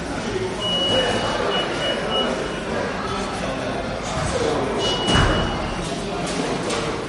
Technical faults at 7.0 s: MP3 compression

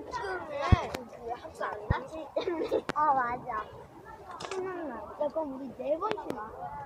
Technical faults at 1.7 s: compressed frames skipped

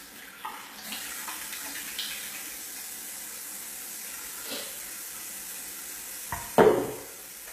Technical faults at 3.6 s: HE-AAC compression

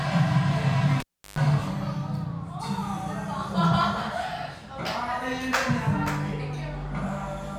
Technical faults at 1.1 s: cable pulled and plugged in

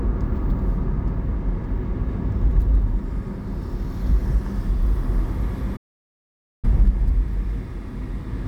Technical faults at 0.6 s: none

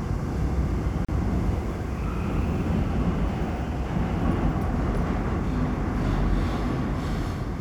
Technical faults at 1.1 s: gap at a join of encoded pieces

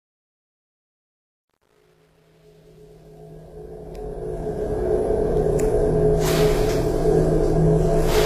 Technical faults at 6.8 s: HE-AAC compression

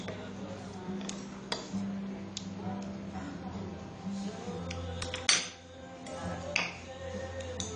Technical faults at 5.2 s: AAC compression

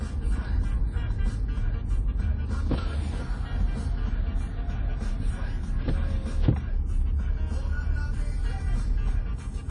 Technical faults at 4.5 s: WMA compression

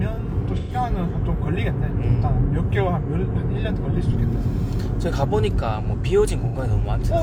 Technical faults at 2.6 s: none

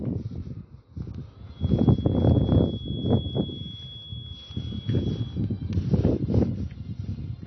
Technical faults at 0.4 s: AAC compression

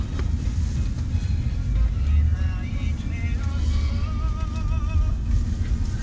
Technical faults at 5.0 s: none

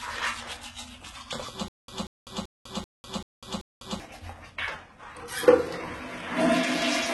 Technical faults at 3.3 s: HE-AAC compression; stutter with silent gaps

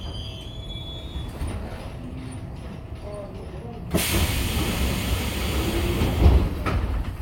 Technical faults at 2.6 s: none

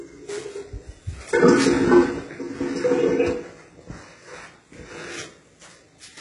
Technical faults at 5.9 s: HE-AAC compression

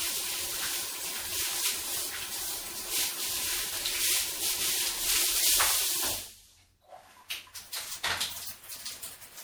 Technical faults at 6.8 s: generation loss

